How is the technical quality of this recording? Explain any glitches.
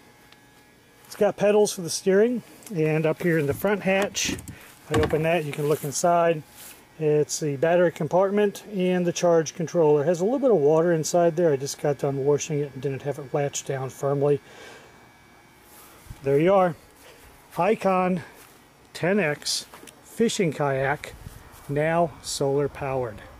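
No glitches or faults heard.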